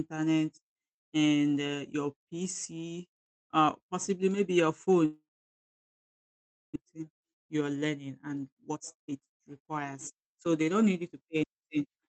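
Right after "uh possibly maybe your", at 5.05 s, the sound cuts out until 6.78 s. That's most likely a long network dropout. There's a brief fading tail, then about 1.5 s of near-silence, and roughly a second of the original audio never comes back.

After that, the receiver is sitting on a much deeper backlog, so you get jitter buffer speed-up. From 6.86 to 7.85 s it plays at 109% speed, trimming about 100 ms. From 8.28 to 12.01 s it runs at 115%, trimming around half a second. The pitch holds steady, but the talking sounds noticeably hurried.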